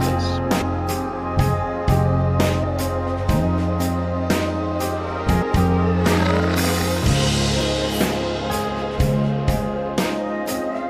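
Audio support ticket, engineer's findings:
The sound jumps forward at 0.61 s, 2.63–2.65 s, 5.41 s and 7.60 s. Compressed frames skipped in the decoder: three to ten frames lost per event, roughly a tenth of a second, about a fifth at 5.41 s, consistent with 23.2 ms frames.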